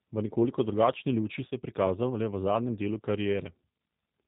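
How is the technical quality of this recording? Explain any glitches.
The recording is clearly degraded, with narrowband codec damage throughout and one brief dropout.

The G.729 codec is plainly audible from start to finish. It rebuilds the speech from a vocal tract model, a pitch predictor and a few pulses per frame, which fits an 8 kbit/s G.729A stream. The result sounds slightly rough and synthetic. A spectrogram shows nothing above 4 kHz, and the harmonics look blurred.

VoIP packet loss concealed by the speech codec occurs from about 1.48 to 1.53 s, right after "nekoliko drugačni luči". About 30 ms of audio, consistent with a single lost packet, was replaced by the decoder extending its last pitch and filter at falling gain. It is heard as a short stretched sound that fades before the speech returns. The waveform shows a brief decaying, repetitive stretch, and the spectrogram shows smeared, fading harmonics.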